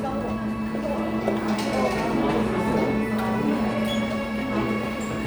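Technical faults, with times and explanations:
Nothing to flag here; the audio comes through without any technical trouble I can hear.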